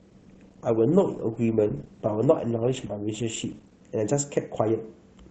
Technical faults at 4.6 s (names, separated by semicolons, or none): none